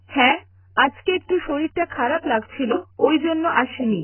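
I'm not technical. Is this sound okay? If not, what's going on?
No. The speech sounds dull, muffled and smeared the whole way through, with a watery, warbling edge on hissy sounds and nothing above 3 kHz. That likely comes from heavy AAC compression, which squeezed the audio so hard that the crisp upper detail was thrown away.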